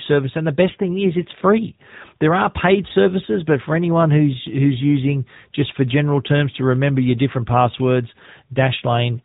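Throughout, the speech has passed through the AMR narrowband mobile codec at a bitrate that sounds like roughly 10 kbps, so nothing above 4 kHz survives, leaving a muffled, plainly buzzy, synthetic voice.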